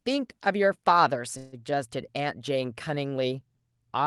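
At 1.37 to 1.55 s the speech stalls in a call audio freeze: the last sound is drawn out as a fading buzz for about 0.15 s, likely because delayed packets emptied the jitter buffer. Unlike a dropout, nothing is skipped. The speech resumes exactly where it paused, just later, over a call codec band that tops out near 12 kHz.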